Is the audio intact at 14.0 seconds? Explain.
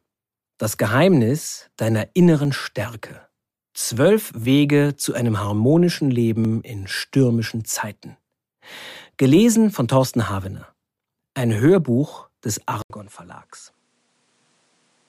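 No, from 12.82 s to the end it sounds like an input switched to a poorer device, likely: an 80 ms gap, then duller audio cut above 11.4 kHz, about 5 dB quieter, with new faint background noise.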